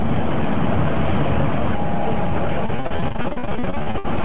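From 2.66 s to 4.21 s the sound breaks up with repeated packet loss, giving a robotic sound. Packets keep going missing or arriving late, and each hole is filled by extending the last good audio before the next hole arrives. About 25 such gaps occur, the longest near 59 ms, leaving close to half that stretch concealed. The result is choppy, with pieces dropped, over a narrowband call path that carries nothing above 4 kHz.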